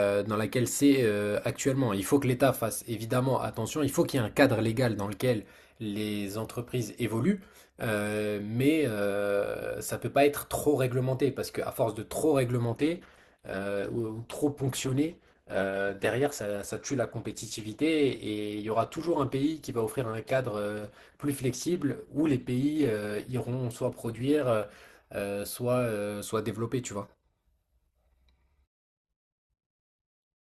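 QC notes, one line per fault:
12.66 to 24.66 s, adaptive stream at a lower bitrate: for 12 s the connection slowed and the player switched to a cheaper encoding of the same stream. The coder drops detail it can't afford, so the speech loses everything above about 12.1 kHz, sibilants go dull or synthetic, and codec artefacts thicken. The quality drop and recovery are abrupt with no gap, which points to a switch from Opus at around 64 kbit/s down to roughly 12 kbit/s.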